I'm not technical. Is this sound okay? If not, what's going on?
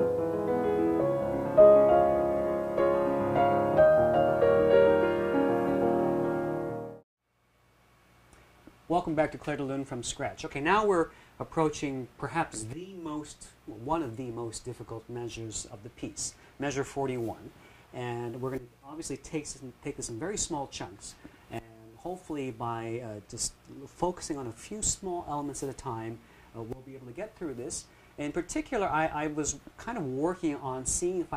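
Yes, it sounds fine, with nothing in it that needs worrying about.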